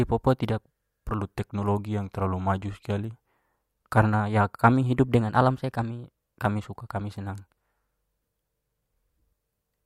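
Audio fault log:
1.18–3.13 s, drift correction step: clock-matching software likely stepped the playback rate down to refill its buffer. Just after "papua tidak", speech slows 6.1% and drops 109 cents, about a semitone, then snaps back.
5.14–6.42 s, drift correction step: clock-matching software likely stepped the playback rate up to drain its buffer. Speech runs 6.1% fast and rises 103 cents, then snaps back just before "suka kami senang".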